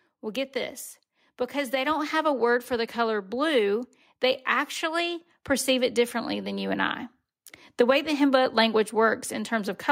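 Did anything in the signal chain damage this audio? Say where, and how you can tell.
Yes: automatic gain rising in call processing. After "get this", voice and background swell together by about 5 dB from 1.52 to 3.36 s, unlike a talker simply speaking louder.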